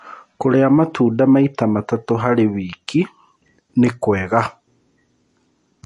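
From start to finish the speech carries plainly audible MP3 compression, likely from a low-bitrate encode around 48 kbps: nothing survives above about 11.3 kHz, and the sound turns watery.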